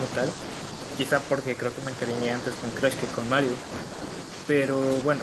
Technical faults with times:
none

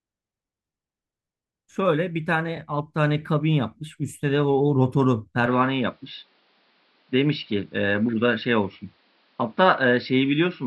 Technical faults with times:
2.56-2.58 repeated frames
5.46-10.66 input switched to a poorer device

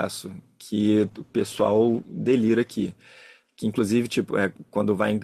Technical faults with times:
0.97-2.93 call bitrate drop

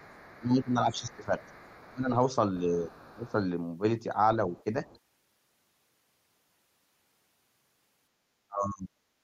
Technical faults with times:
0.00-0.41 other side's voice leaking through
0.35-1.41 speech suppressed in double talk
0.96-1.92 other side's voice leaking through
1.82-2.12 speech suppressed in double talk
2.66-3.36 speech suppressed in double talk
2.91-3.07 other side's voice leaking through
4.54-4.99 other side's voice leaking through
8.47-8.90 speech suppressed in double talk

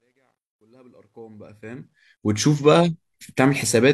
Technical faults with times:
0.00-2.40 truncation distortion on a fade

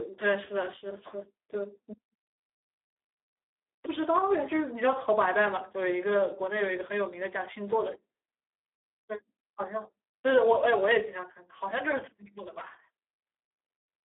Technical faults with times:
0.00-14.09 Speex codec

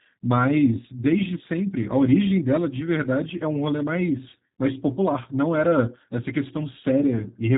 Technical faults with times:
0.00-7.57 G.729 codec

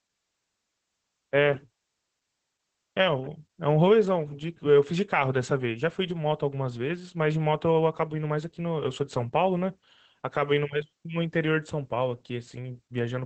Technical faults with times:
0.00-13.25 Opus voice compression

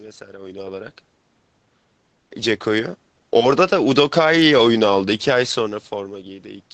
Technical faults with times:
2.41-4.97 automatic gain rising

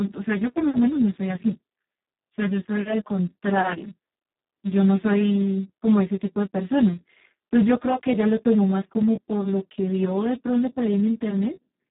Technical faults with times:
0.00-11.90 Speex codec

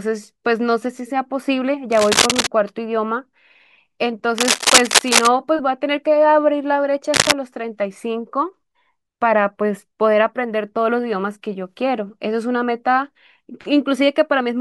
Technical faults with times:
1.92-2.47 cable scratch noise
4.38-5.27 cable scratch noise
7.12-7.33 cable scratch noise

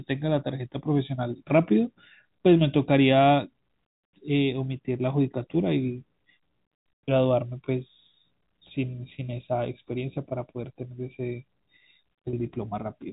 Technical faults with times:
12.30-12.33 packet loss with pitch repetition

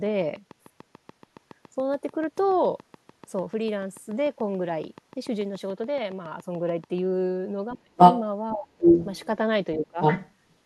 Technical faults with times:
0.06-6.99 train of clicks
7.70-8.21 other side's voice leaking through
7.74-7.90 speech suppressed in double talk
8.54-8.70 speech suppressed in double talk
8.73-9.26 other side's voice leaking through
9.76-9.99 speech suppressed in double talk
10.01-10.55 other side's voice leaking through

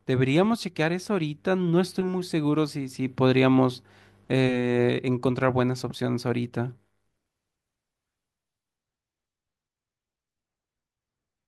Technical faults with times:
none

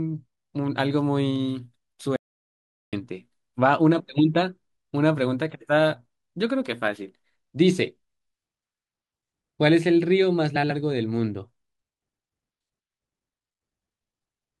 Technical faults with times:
2.16-2.93 audio dropout to silence
10.55-10.71 frames out of order

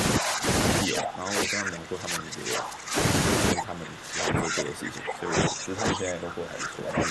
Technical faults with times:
0.19-0.46 speech suppressed in double talk
0.84-2.97 speech suppressed in double talk
3.53-7.10 speech suppressed in double talk

